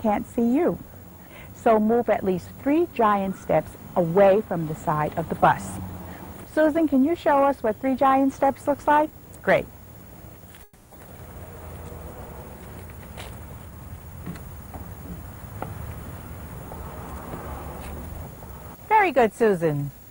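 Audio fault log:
10.63–10.93 s, call audio freeze: the sound stalls and is stretched into a fading buzz or hiss for about 280 ms, then resumes exactly where it stopped, with nothing lost. This is likely a brief packet delay that emptied the jitter buffer. The delay grows by about 280 ms.
13.59–14.68 s and 18.36–19.31 s, jitter buffer speed-up: the sound runs at 114% and then 111% speed with pitch unchanged, so it sounds hurried. The receiver trimmed short pitch-period slices to drain the built-up delay, around 150 ms and then around 100 ms in total.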